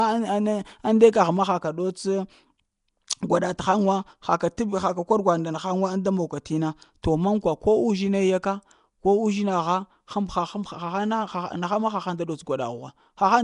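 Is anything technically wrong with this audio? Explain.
Yes. Throughout the speech there is a rough, hissy halo around the sound and a smeared, underwater quality, with nothing above 10.6 kHz. This is likely Nellymoser compression, the old Flash microphone codec, here at a rate that fits about 44 kbps. It codes short blocks with a fixed, small bit budget, so weak bands are dropped and filled with noise. On a spectrogram this appears as a hard ceiling at 10.6 kHz and grainy, speckled noise patches between harmonics.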